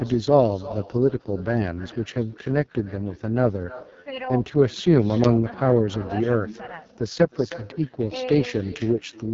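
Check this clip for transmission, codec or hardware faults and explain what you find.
Two faults run through the whole clip: an uncancelled echo and heavily degraded AMR wideband coding.

Echo with no canceller: the far end's loudspeaker feeds its microphone unchecked, so every phrase returns about a third of a second later, a thin shadow roughly 19 dB down.

AMR wideband (HD Voice) codec: the rough, raspy, heavily damaged texture points to AMR-WB at its lowest rate, around 6.6 kbit/s. Its crude vocal-tract model smears the speech, and nothing is heard above 7.5 kHz.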